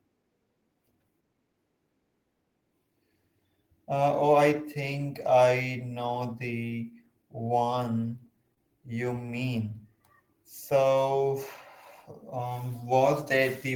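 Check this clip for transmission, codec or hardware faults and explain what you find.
The speech has three transmission faults, all from the receiver's jitter buffer. There are two short stalls from late packets and one jitter buffer slow-down.

Short stall from a late packet, at 8.54 to 8.58 s, just after "I know the one", and at 9.26 to 9.29 s, after "know the one you". Each time a packet missed its slot and the buffer ran dry. The receiver held the last sound for about 26 ms, then 17 ms, and resumed where it left off. Nothing is lost. A sound just lingers briefly, with a faint buzz or dip.

Jitter buffer slow-down, from 9.48 to 10.28 s, also after "know the one you". Following the stalls, the buffer rebuilt its reserve by repeating single pitch periods and slivers of pauses. About 41 ms was added over that stretch, so playback runs at roughly 96% speed. The pitch stays the same. Sounds are drawn out slightly, with a possible mild warble.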